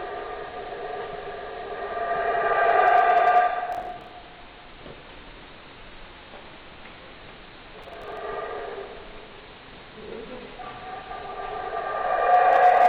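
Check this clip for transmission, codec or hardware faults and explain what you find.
Two bursts of processor overload crackle are present. From 3.73 to 4.11 s, and again from 7.83 to 8.17 s, a gritty tearing rides on the sound and then stops. The processor couldn't finish its small audio buffers, around 10 ms each, on time, so blocks were skipped rather than played. The first burst drops several dozen, the second about 15. Each skip leaves a hard-edged gap, and the string of gaps blurs into crackle.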